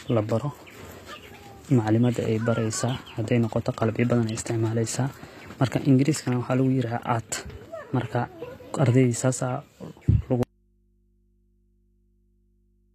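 It's a speech clip, and the whole thing has that HE-AAC compression sound. The sibilants come out gritty and a bit lispy, and the top end is bright but not quite real, with nothing above 14.9 kHz. That's the signature of the treble being rebuilt by copying lower bands upward rather than coded directly, likely at a low rate, something in the region of 24 kbps. Then at 10.43 s there's an audio dropout to a faint residue that lasts to the end. The speech cuts off abruptly, not a pause or a fade, and what's left is just mains hum, something like 40 dB below the level the speech was running at. That points to the signal feeding the chain likely being lost while the input after the break stayed open and kept picking up hum.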